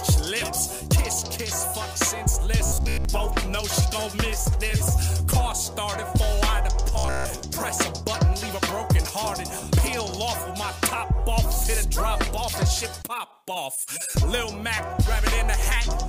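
From 2.66 to 3.05 s, and again from 6.94 to 7.46 s, the sound goes robotic: a rigid, metallic buzz near 66.8 Hz. That's likely a short buffer of about 15 ms repeating while most of the real audio gets skipped.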